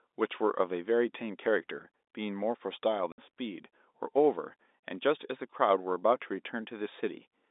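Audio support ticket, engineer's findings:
Packet loss filled with silence, 3.12–3.18 s: 60 ms hard-edged dropout, fits three 20 ms packets replaced by silence. Flat-line waveform gap; blank vertical strip across spectrogram's telephone band.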